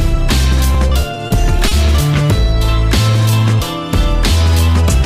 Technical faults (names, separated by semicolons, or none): repeated stalls (stutter); short stall from a late packet; jitter buffer slow-down